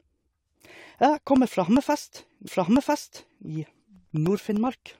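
Periodic USB or driver dropouts run from 1.16 s to 4.87 s, spaced every 0.1 s. Something on the USB bus or in the audio driver stalls at that fixed interval, and each time roughly half a millisecond of speech is replaced by silence, giving a steady train of ticks beneath the talking.

A stream segment repeated at 2.46 s: the player fetched or queued the same chunk twice, so about 1 s of speech, up to 3.46 s, plays a second time, with a brief blip marking the jump back.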